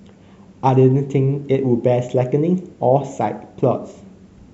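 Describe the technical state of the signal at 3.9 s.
At 3.9 s the speech signal is intact, with no audible fault at that moment.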